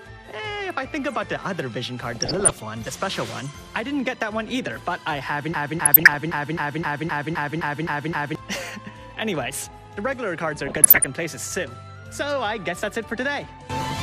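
The whole clip carries MP2 compression, and it's plainly audible. It's dull on top, with that gurgling, grainy texture you get when Layer II runs short of bits and starts shutting off upper sub-bands and quantising the rest coarsely. The damage fits a low rate somewhere around 80 kbps, likely an MP2 encode of the kind low-rate digital radio uses.

From 2.12 to 2.62 s there's a burst of DAB burbling. Bit errors, at a rate somewhere under one percent, slipped past the error correction into the MP2 data, so wrong samples put short blips of noise into individual sub-bands. It comes across as short noisy blips sitting over the sound.

At 5.54 s a broken-record loop kicks in and runs to 8.35 s. A 0.26 s fragment repeats exactly, back to back, eleven times over, so it stutters rhythmically, and whatever should have played in those nearly three seconds is just gone. It's likely the player or stream stalled and kept replaying the last chunk it had buffered. 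Inside that loop, from 5.84 to 6.14 s, there's a second, shorter burst of DAB burbling, with errors at roughly half a percent, adding short noisy blips on top of the repeats.

The third DAB burbling burst runs from 10.66 to 11.09 s. It's the heaviest of the three, at around one percent bit errors, so the errors are at their densest there.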